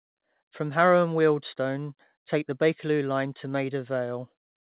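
Nothing goes wrong in this speech, which simply comes across as an ordinary phone-style call, with nothing above 4 kHz in a way that fits a narrowband G.711 mu-law codec.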